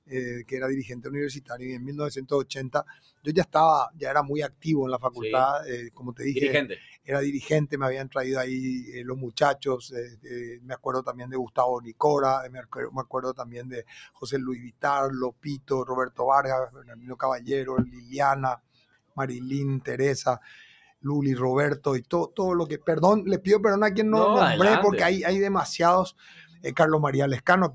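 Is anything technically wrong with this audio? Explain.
Yes. A noise suppressor meant for a call microphone has been left running on this sound. Throughout, it treats held tones, ambience and decaying tails as noise and pulls them down by around 15 dB, while sharp onsets pass. The result pumps and thins. Unlike a gate, it never shuts fully, and the dips follow sustain rather than level.

Sound cut by the noise suppressor is clearest at 0.01–5.23 s, 5.78–7.1 s, 8.82–19.17 s, 20.71–21.04 s, 22.03–22.87 s and 26.12–26.65 s, with drops of about 17 dB (about 16 dB in the last). Sustained passages sink and tails are cut off early, so these stretches sound hollowed out compared with the transients around them.

Nothing above 8 kHz is present, which fits the call's normal microphone processing.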